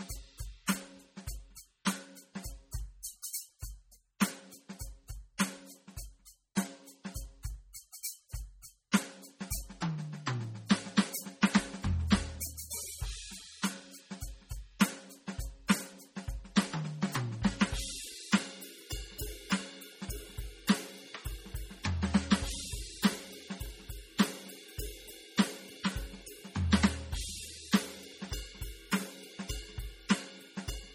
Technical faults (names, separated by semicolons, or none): MP3 compression